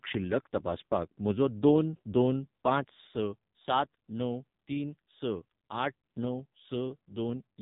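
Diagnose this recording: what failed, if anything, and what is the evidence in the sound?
Buzzy, synthetic speech with nothing above 3.8 kHz throughout: codec-stage AMR narrowband mobile codec damage, heavy enough to suggest a rate near 6 kbps.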